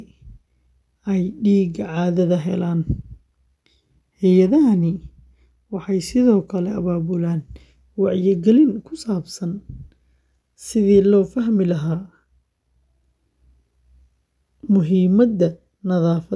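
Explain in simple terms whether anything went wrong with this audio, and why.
Nothing went wrong here.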